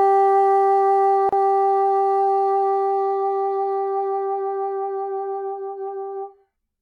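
A short sound clip with a gap at a join of encoded pieces: separately encoded segments were joined untrimmed, leaving a silence of about 34 ms from 1.29 to 1.33 s before the sound resumes.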